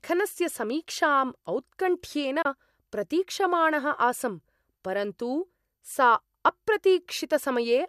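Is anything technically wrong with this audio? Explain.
Yes. At 2.42 s to 2.46 s the speech has a digital broadcast dropout: the receiver rejected corrupted data and muted, fading out over about 8 ms into a roughly 24 ms hole, which fits a single lost frame. That stretch of programme is gone, heard as a brief gap.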